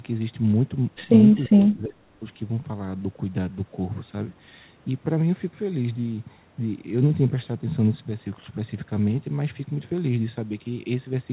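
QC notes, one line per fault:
1.47–2.17 s, speech suppressed in double talk: the talker's level sinks by about 25 dB for roughly 0.7 s, the sound thinning and partly dropping out. This is likely an echo canceller treating overlapping far-end talk as its own echo and attenuating everything. On the waveform the envelope collapses to a narrow, ragged band. On the spectrogram the energy fades across the band, which stops at 4 kHz on this G.711 call path, leaving faint, broken traces.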